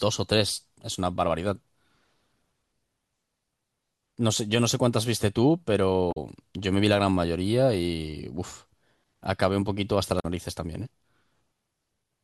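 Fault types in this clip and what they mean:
Damaged data in a compressed stream: two short glitches break into the speech, one from 6.09 to 6.17 s and another from 10.17 to 10.25 s, each lasting under a tenth of a second. Both are places where part of the compressed stream was corrupted. The decoder misread those frames, lost its place in the stream and had to hunt for the next valid frame header before normal playback resumed.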